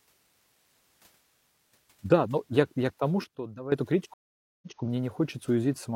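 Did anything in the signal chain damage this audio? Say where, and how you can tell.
Yes. Just after "я я к тому", from 3.24 to 3.72 s, the speech and the background noise both drop by about 12 dB at the same instant and stay down together before returning. The likely cause is a digital gain stage in the processing chain applying a new setting between one sample and the next with no ramp. That kind of change scales everything equally, which is why the noise floor falls with the speech. This is a sudden gain jump.

At 4.14 s there is a stream reconnect at the network and playback stage. The audio cuts to silence for 481 ms. When it comes back, it resumes 186 ms earlier than where it broke off, so a short stretch is heard twice, and the disturbance ends at 4.80 s. That pattern matches a player that lost its connection, reconnected, and started a fresh decoder on a server burst that resent data it had already played.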